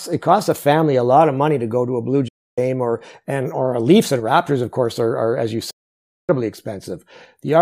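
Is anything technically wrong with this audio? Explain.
Yes, there's a digital broadcast dropout in this speech, twice. From 2.28 to 2.58 s the sound fades out over about 8 ms and sits silent for roughly 0.3 s, then again from 5.70 to 6.30 s for nearly 0.6 s. The receiver lost the signal or got corrupted frames and muted until clean ones arrived. The gap lengths fit whole frames of about 32 ms being thrown away, so whatever was sent in those holes is gone for good.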